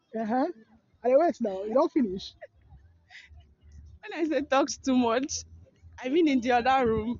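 No technical faults can be heard anywhere in the audio, and the signal stays steady and intact throughout.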